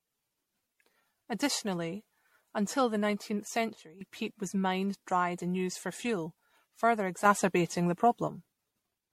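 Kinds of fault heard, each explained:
Generation loss: The speech sounds swirly, smeared and hollow, with blurred attacks and nothing above 16.5 kHz. That is worse than one MP3 pass at the 64 kbit/s the sound suggests. It is likely from about seven re-encodes, each adding fresh quantisation noise.
Sudden gain jump: Speech and background noise step in level together, with no ramp. The level drops about 12 dB from 3.76 to 4.01 s, before "peat was mined dried", then rises about 6 dB from 7.25 to 8.28 s, after "used for fuel further". The likely cause is an instant digital gain change.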